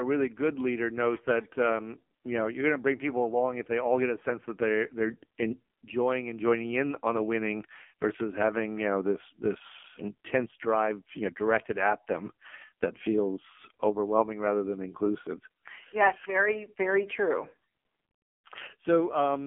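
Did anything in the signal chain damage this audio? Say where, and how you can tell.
Yes. The damage comes from the codec stage: an AMR narrowband mobile codec encoded the speech, and the artefacts run through the whole clip. The band is cut to roughly 200 Hz to 3.4 kHz, with nothing above 3.5 kHz, and the voice has a heavy buzzy, synthetic quality. This fits a low AMR-NB mode around 5.9 kbps, where a few excitation pulses per subframe drive the vocal-tract model. A plain telephone-band filter would narrow the sound without adding that buzz.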